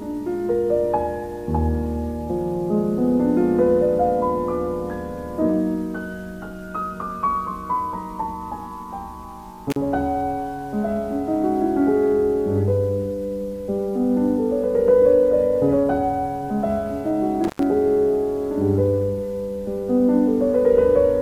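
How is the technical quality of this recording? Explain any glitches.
The recording has two brief breaks from an intermittent contact. At 9.70 to 9.76 s and again at 17.44 to 17.63 s, a loose cable or plug momentarily lost connection, opening the signal path for about 40 ms and then about 97 ms. While the line was open the audio cut out, leaving faint hiss. Crackle marks each edge as the contact broke and remade. The second gap is longer.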